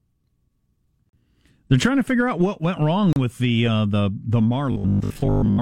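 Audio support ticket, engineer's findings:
Gap between stream segments at 1.09–1.13 s (about 38 ms) and 3.13–3.16 s (about 33 ms), between "out what went wrong" and "with the uh the". Hard-edged silence. Two seconds apart, matching 2 s segment boundaries. Timestamps leave a hole, filled with silence. No audio lost.

Robotic sound from repeated short buffers at 4.72–5.60 s, after "the uh the the". Rigid metallic buzz at 50 Hz, speech shape still roughly audible. Likely cause is input starvation. The last 20 ms gets replayed, and most of the real audio in that span is skipped.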